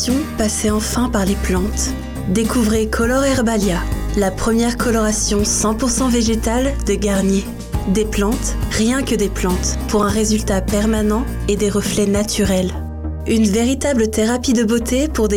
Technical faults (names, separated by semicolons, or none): block of digital silence